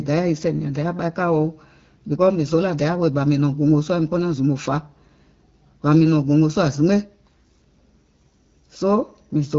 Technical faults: none

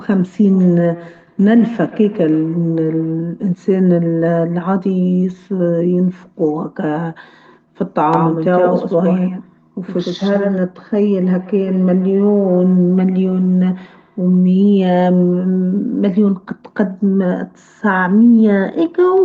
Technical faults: feedback echo between two devices; doubled audio track

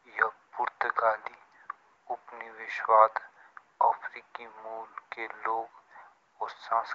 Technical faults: none

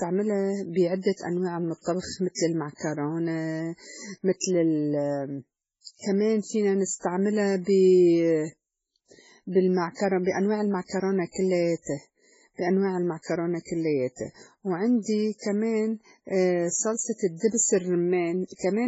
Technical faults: MP3 compression

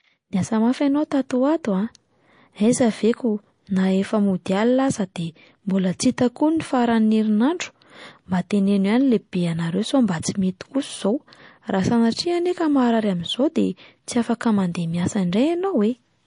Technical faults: MP3 compression

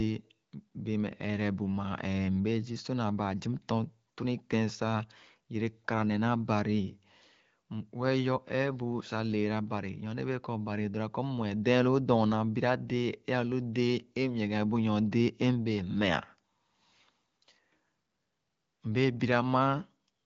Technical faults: none

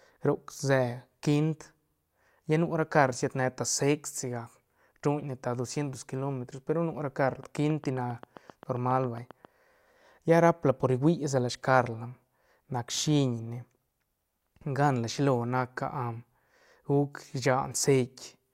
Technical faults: train of clicks

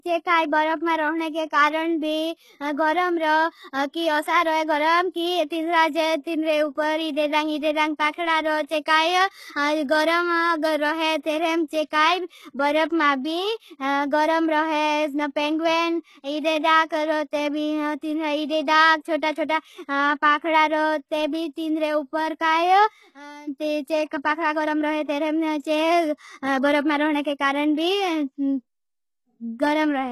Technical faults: HE-AAC compression; pre-echo

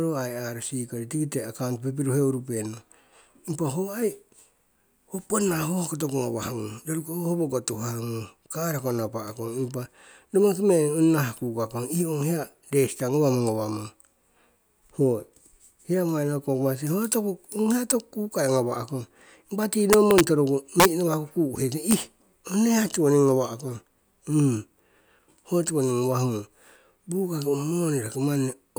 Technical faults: integer overflow

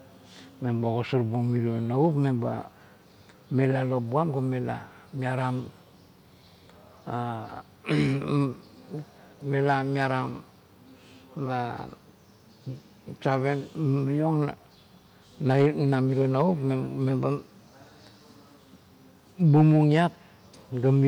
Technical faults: drift correction step

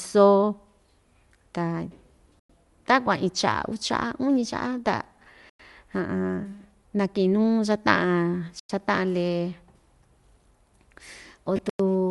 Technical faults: Bluetooth LC3 compression; gap between chunks; lost LE Audio frames

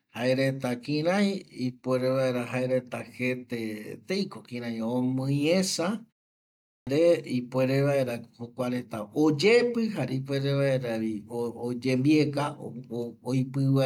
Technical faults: clipped start after a pause

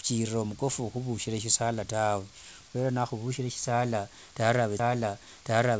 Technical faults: CD skip

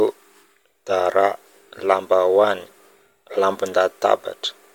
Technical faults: none

